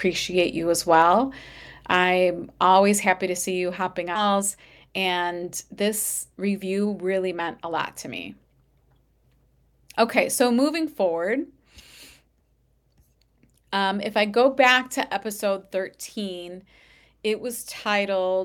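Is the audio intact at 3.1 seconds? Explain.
No, there's a microphone volume stepped down at about 3.06 s, just before "to see you hopping". The speech and background drop together by about 3 dB in one step, likely the call software pulling the mic's input gain down because it judged the level too hot.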